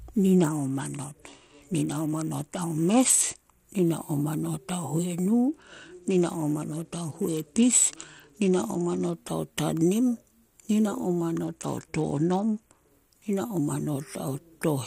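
Speech whose treble dulls and turns gritty from 0.38 to 3.65 s, 5.49 to 9.13 s and 11.44 to 12.91 s: a Bluetooth SBC bit pool drop. The fall from roughly 28 to 10 fits about 84 kbps, starving the upper sub-bands and coarsening the rest.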